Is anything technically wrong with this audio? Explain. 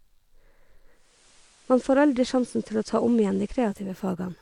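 Yes. From 0.91 s to 3.98 s the speech picks up a steady hiss, about 30 dB below the signal. The level stays the same. This is digital radio blending to analogue: the receiver lost its digital stream and cross-faded over about 0.36 s to the station's FM broadcast, whose background noise replaces the clean digital audio until it blends back at 3.98 s.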